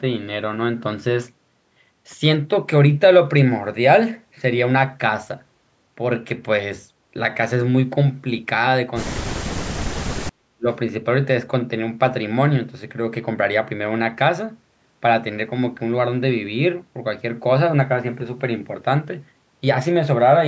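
From 9.19 to 9.49 s and 9.92 to 10.67 s the speech drops sharply, by roughly 40 dB, likely speech suppressed in double talk by the echo canceller.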